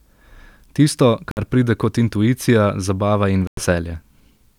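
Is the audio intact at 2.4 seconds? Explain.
Yes, at 2.4 seconds the speech plays through intact, with no dropout, click, distortion or other fault to be heard at that point.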